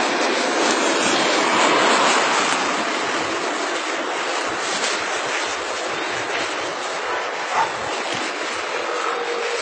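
Throughout, the sound likely went through transcoding between lossy codecs, MP3 then HE-AAC, so their different artefacts are heard together, and a spectrogram shows nothing above 9 kHz.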